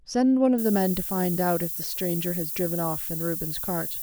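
From 0.58 s to the end, the speech shows low bit depth with noise shaping. The coarse rounding fits about 5-bit resolution, and the error is pushed upward, giving a steady, thin hiss that climbs toward the top of the band, nearly as loud as the speech.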